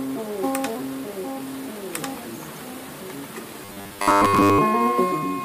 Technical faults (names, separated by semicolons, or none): robotic sound from repeated short buffers